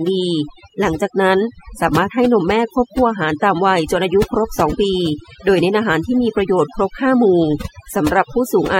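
Overdone noise removal runs through the whole clip. A noise reduction stage was set too strong. It pulls individual frequency bands far down whenever they sit near its noise estimate. Quiet parts of the speech vanish with them. Pauses fall to near silence, dotted with twinkling specks.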